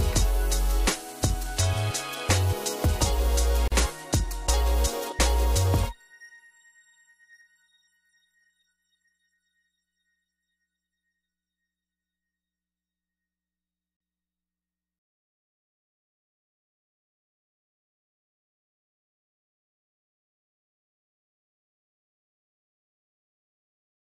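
At 3.68 s the continuous sound drops out into a brief silence of about 40 ms, ending at 3.72 s, then resumes exactly where it left off. Its edges are smeared and softened. This is a gap at a join of encoded pieces. Two sections were encoded separately and butted together untrimmed, so the first section's padded final frame and the second section's start-up silence both remain, leaving a hole in the middle of the sound.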